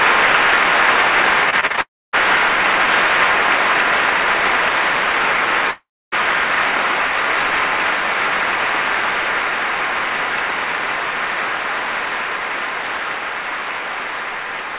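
From 1.50 to 1.79 s the audio turns choppy and robotic: repeated packet loss punches five short holes, the longest about 33 ms. Each is patched by stretching the preceding sound, so nearly 40 percent of that span is concealment rather than real signal.

Immediately after, from 1.81 to 2.15 s, the sound smears into a fading buzz and then drops to about 250 ms of silence before resuming with material missing, likely a long network dropout. The same pattern recurs from 5.71 to 6.19 s, with roughly 280 ms of silence. Throughout, nothing sounds above 4 kHz, consistent with a narrowband G.711 call codec.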